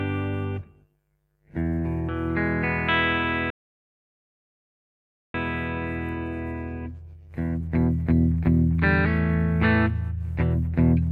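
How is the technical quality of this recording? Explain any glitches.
A playback stall interrupts the recording from 3.50 to 5.34 s. The sound halts mid-flow for about 1.84 s, likely because the player starved for data, then resumes. The waveform shows a flat line and the spectrogram a blank vertical band.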